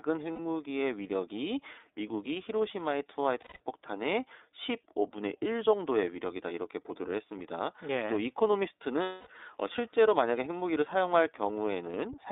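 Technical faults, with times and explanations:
Throughout, iLBC codec: The whole clip is squeezed into a narrow phone band of roughly 300 Hz to 3.7 kHz, so there's no air or sibilance on top and little body underneath. The coding damage is plainly audible as a slightly rough, synthetic edge on the speech. Each block is coded on its own, and the sound points to 30 ms frames, which fits iLBC's 13.33 kbps mode.
0.33–0.39 s, 3.41–3.60 s and 9.03–9.27 s, lost iLBC frames: Three dropouts, lasting 60, 180 and 240 ms, which fits runs of two, six and eight lost 30 ms frames. The decoder fills each hole by repeating the last pitch cycle with some noise mixed in. You hear that as a held, buzzy, breathy vowel, and it fades on the two longer ones. Because each iLBC frame stands alone, the speech snaps back cleanly right after each gap.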